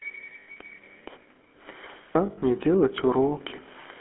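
Speech carried through the GSM full-rate codec for its whole length: the band runs only from about 250 Hz to 3.4 kHz, and a plainly audible buzzy, gravelly roughness from the pulse-driven vocal-tract model runs through the speech, which fits the 13 kbps full-rate coder rather than a plain band-limited line. Lost GSM frames break in at 0.40 to 0.57 s and 2.26 to 2.43 s, each scattered over about 160 ms, with the longest runs around 40 ms and 70 ms. Unlike a dropout's silent gap, each loss holds the last good sound as a rough, metallic ring.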